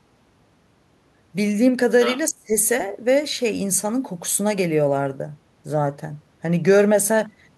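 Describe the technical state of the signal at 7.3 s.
At 7.3 s the speech signal is intact, with no technical fault to be heard at that moment.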